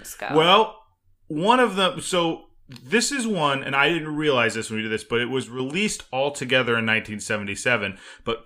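A digital gain change landing on a single sample with no ramp, most likely a level setting or bit shift applied abruptly, causes a sudden gain jump in this speech clip at 5.43 s, just after "did this but it". Speech and background noise drop together by about 6 dB in one step, and the lower level holds for roughly 0.16 s until 5.60 s, recovering just before "all together in".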